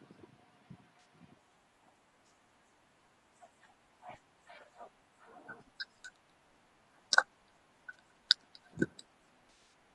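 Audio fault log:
throughout, low-delay AAC compression: The speech sounds rough and grainy, with a hiss between the harmonics and a thin, synthetic-sounding top band. This is likely low-delay AAC such as AAC-ELD at a low rate, and the degree of damage fits about 32 kbps. At such a low rate there are too few bits to code all of its roughly 500 frequency lines per frame accurately, so noise fills in between the harmonics. On a spectrogram, harmonic stripes blur into a noise floor between them, and the upper band looks patchy and smoothed.
0.99–1.05 s, 7.93–7.95 s and 9.49–9.73 s, AAC frame loss with concealment: At these points the speech briefly smears into a noisy, phasey patch while the decoder rebuilds the missing audio from the last good spectrum. The first gap lasts 60 ms and sounds like about three lost frames. The second is a single 20 ms hole. The last spreads 160 ms of loss over 240 ms, with runs of up to roughly 40 ms. 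On a spectrogram these show as smeared, noise-filled blocks with weakened harmonics. On the waveform the envelope goes blurred and slightly hollow.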